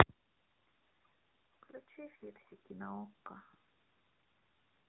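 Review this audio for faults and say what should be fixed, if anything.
Throughout the clip, the speech sounds boxed-in and plainly buzzy, with nothing above 3.8 kHz. This is the AMR narrowband mobile codec. Its 8 kHz sampling caps the band, and rebuilding speech from a vocal-tract model driven by sparse pulses adds the synthetic edge. The damage fits a mid-rate mode around 10 kbps. To prevent it, record or route the audio through a wideband path rather than AMR-NB.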